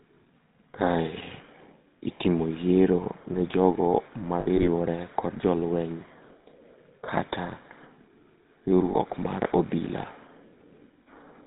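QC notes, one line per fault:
throughout GSM full-rate codec: a buzzy, gravelly roughness sits on the whole voice with nothing above 4 kHz, which fits 13 kbps full-rate coding. The vocal tract is rebuilt from coarse pulse excitation, so this is grain built into the voice, not simple low-pass dullness.
4.40–4.68 s and 8.92–8.96 s lost GSM frames: brief rough, metallic rings where damaged frames were filled by repeating the last good one. The first spans about 240 ms with about 100 ms missing, its longest gap roughly 70 ms. This is a held ring, not a silent dropout.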